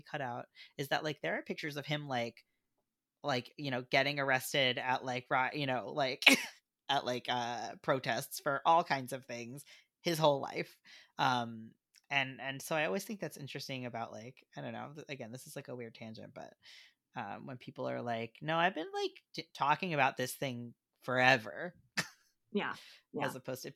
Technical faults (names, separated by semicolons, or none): none